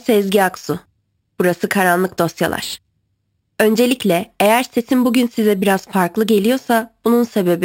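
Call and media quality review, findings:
Imaging from sample-and-hold upsampling, whole clip. Bright metallic fizz riding on the speech, tracking its level, about 19 dB below signal. First mirror image spans 6 to 12 kHz, consistent with a 12 kHz source held up to 44.1 kHz. Resampler lacks an anti-imaging filter.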